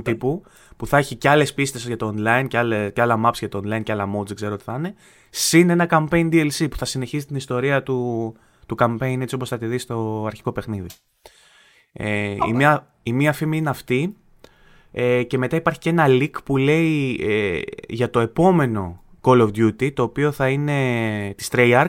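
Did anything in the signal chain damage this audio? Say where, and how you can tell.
No, nothing in the signal chain stood out on listening to this speech recording.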